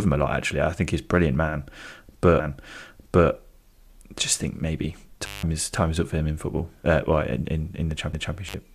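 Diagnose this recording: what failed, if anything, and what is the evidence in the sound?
Intermittent contact at 5.26 to 5.43 s and 8.48 to 8.54 s: analogue wiring. A loose cable or plug briefly opens, dropping the speech for 175 ms and 52 ms with crackle at each edge.

CD skip at 8.13 s: playback. A tick and a very short mute, then the speech resumes elsewhere, as the laser jumps to another turn of the disc's spiral.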